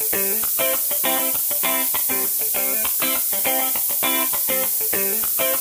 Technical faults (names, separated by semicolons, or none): low bit depth with noise shaping